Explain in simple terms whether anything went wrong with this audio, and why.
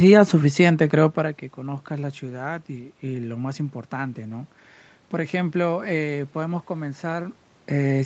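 Nothing went wrong here: the only things you might notice, like background room sound or the level shifting around 1 s and again near 7.5 s as the talker moves, are just part of an ordinary call recording.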